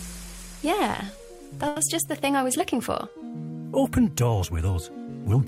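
At about 1.67 s there's a short stall from a late packet: a packet turned up late, the jitter buffer ran dry, and the receiver stretched the last bit of sound by about 90 ms until 1.79 s. Nothing's lost; the sound just hangs briefly, then resumes about 90 ms later.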